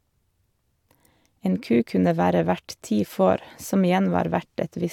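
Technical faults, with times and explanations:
Listening through the speech, nothing stood out as a technical problem at any point.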